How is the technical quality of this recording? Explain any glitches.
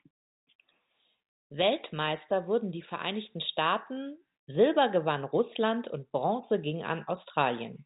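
No glitches to point out here. The speech arrives as ordinary landline telephone audio, with the G.711 coding topping everything out at about 4 kHz, just as that format is meant to.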